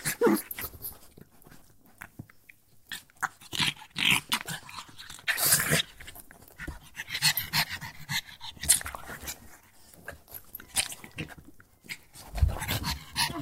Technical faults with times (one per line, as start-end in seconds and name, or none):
none